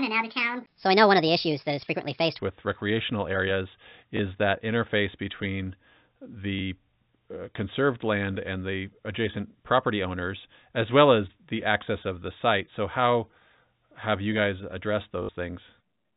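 A section at the wrong speed opens the clip: from 0.0 to 2.39 s, just before "with recreational areas", the speech runs 1.44 times too fast, so it sounds hurried and about seven semitones too high. Speed and pitch shift together, most likely because this stretch was played against the wrong clock. Packet loss with last packet repeated appears as two small blips and one short robotic stutter across the band-limited, telephone-style audio, which is consistent with G.711. The first comes at 4.17 s, between "with recreational areas" and "that interface between". The second comes at 6.59 s, and each of these first two lasts 20 ms. The third runs from 15.23 to 15.29 s and spans 60 ms, which fits three consecutive 20 ms packets. In each gap the receiver replayed the last packet it had instead of the missing ones. The longer run takes on a buzz at 50 Hz.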